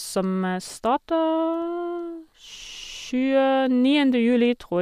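Nothing in this recording trips a fault; the speech runs along without any dropout, glitch or stumble catching the ear at any point.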